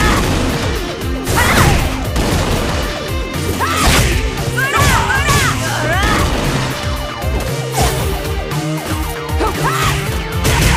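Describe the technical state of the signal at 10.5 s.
At 10.5 s the signal is intact, with no audible dropout, distortion, glitch or other fault.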